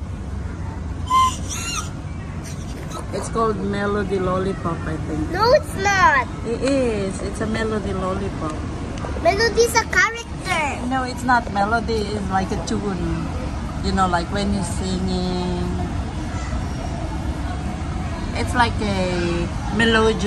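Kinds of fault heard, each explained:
Dropped samples: At 7.58 s there is a single sharp click, a brief broadband tick that would show as a thin vertical line across the spectrum. This is likely a couple of samples missing from the stream, a gap of only a few hundredths of a millisecond. The waveform jumps straight from one value to a later one, and that step makes the click. The gap is far too short to remove any audible sound.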